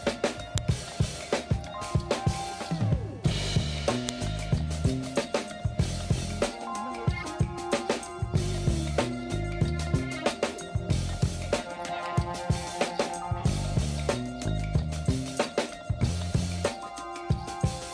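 Sharp, loud clicks at 0.58 s and 4.09 s are a file header played as audio: WAV header bytes left at each joined piece's start, played back as samples.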